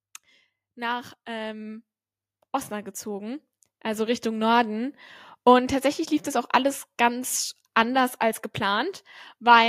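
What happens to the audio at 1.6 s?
At 1.6 s the speech is mid-way through an automatic gain rise, running from 0.74 to 1.91 s: the gain control boosts a quiet input by about 5 dB, swelling voice and background together.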